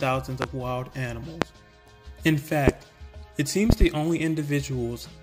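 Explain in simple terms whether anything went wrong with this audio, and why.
Something did go wrong. The audio has a loud pop, four times. Single pops come at 0.42, 1.42 and 2.68 seconds. At 3.70 seconds there are two pops in quick succession, ending by 3.85 seconds. Each one is much louder than the sound around it. That sound carries on underneath. A pop like this is likely caused by a sudden jolt of electricity, from a plug, a switch, static or a driver glitch.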